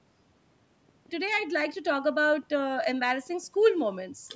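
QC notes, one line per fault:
0.89–4.31 s, train of clicks: about twenty near-identical sharp pulses arrive at a steady 5.9 per second, peaking roughly 10 dB above the speech and ticking on through the pauses. The likely source is interference from nearby equipment or a faulty connection or power supply. The even spacing and matching shape set it apart from random crackle or dropouts.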